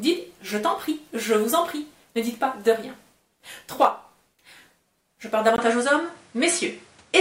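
The audio shows one fault. At 5.56 s a brief gap of about 20 ms is followed by a duller sound with nothing above 10.8 kHz and faint new background noise. Level barely changes. This likely reflects the input switched to a poorer device, lasting to the end.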